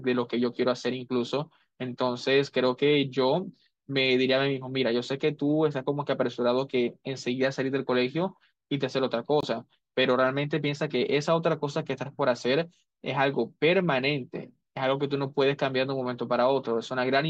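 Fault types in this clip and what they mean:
Corrupt frame muted: abrupt silence from 9.41 to 9.45 s, fitting two rejected compressed frames; a true hole rather than concealment filler, and timing stays intact.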